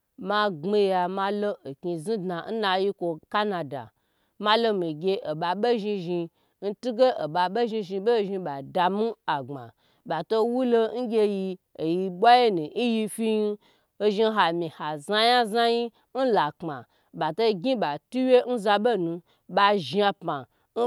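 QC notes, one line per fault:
No technical faults are audible anywhere in the speech recording.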